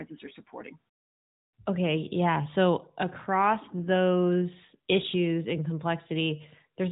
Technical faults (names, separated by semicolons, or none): none